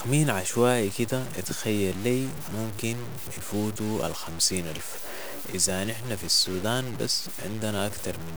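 From start to finish the speech carries low bit depth without dither: grainy, gritty distortion that tracks the voice, with quiet passages sputtering or dropping out. The likely cause is truncation to about 5 bits. The waveform looks stair-stepped, and the spectrogram shows broadband hash riding beneath each syllable, only roughly 15 dB down.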